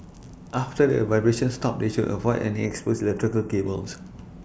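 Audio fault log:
2.66–3.66 s, channel delay (comb filtering): One channel runs a tiny fraction of a millisecond late, which fits a delay of about two samples. Summed to mono, the shared sound cancels near 4 kHz. The speech turns hollow and phasey there.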